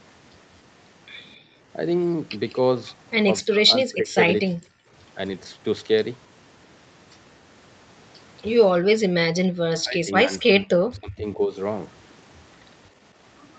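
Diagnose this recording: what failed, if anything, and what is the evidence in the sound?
The echo canceller in the call processing chain clamped down on the microphone while the loudspeaker was playing, producing background gated by the echo canceller. From 1.37 to 1.62 s the room tone sinks by about 16 dB and then returns. At 9.06 to 9.10 s it falls away more sharply, by about 40 dB, for a brief moment. In both cases the canceller treated near-end ambience as echo and held heavy attenuation until its gate released.

The same call processing stage also suppressed the near-end talker, most likely because both sides spoke at once and the echo canceller could not separate the local voice from loudspeaker echo. That is speech suppressed in double talk. The speech drops out or thins from 3.42 to 4.17 s, 4.45 to 4.61 s, 9.51 to 10.68 s and 10.95 to 11.57 s. The cuts range from roughly 25 dB to around 40 dB at their deepest, so the talker fades or breaks into fragments while the suppressor stays engaged.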